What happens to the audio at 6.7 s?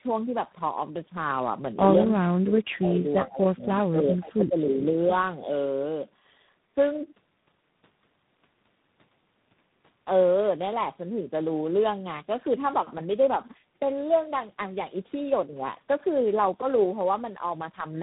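At 6.7 s the speech sounds rough, muffled and warbly, with nothing above 3.8 kHz, as it does throughout the clip. This is tandem speech coding: a G.729A-coded signal passed through G.711 A-law and was then re-coded by G.726, compounding each codec's damage.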